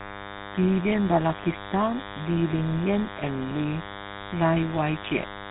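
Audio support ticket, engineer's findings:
DECT cordless phone buzz, whole clip. Thin, steady 100 Hz buzz with dense harmonics, roughly 10 dB under the speech. Nearby DECT handset or base bursting every 10 ms; the audio circuit rectifies the radio pulses into audible buzz.

GSM full-rate codec, whole clip. Plainly audible gravelly, buzzy roughness on the speech; nothing above 4 kHz. Sound fits a 13 kbps GSM full-rate path. The vocal-tract model runs on coarse pulse excitation that keeps one sample in three, which roughens the voice.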